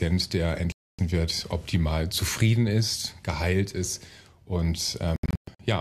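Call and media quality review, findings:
Digital broadcast dropout, 0.72–0.99 s: audio mutes for about 264 ms, then resumes mid-programme. Receiver muting after lost or checksum-failed frames; the gap fits eleven 24 ms frames. Waveform: flat line; spectrogram: full-band blank column.

Digital broadcast dropout, 5.16–5.60 s: several short holes totalling about 288 ms across 432 ms, longest 120 ms. Intermittent frame loss at the receiver. Spectrogram: broken, comb-like blank stripes; waveform: repeated gaps.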